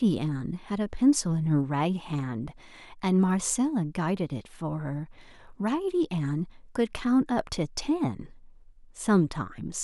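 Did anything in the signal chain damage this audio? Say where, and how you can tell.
Yes: two converters likely running on unsynchronised clocks, off by a few hundred ppm, drop or repeat single samples, giving faint clock slip clicks roughly every 70 ms from 0.10 to 9.79 s.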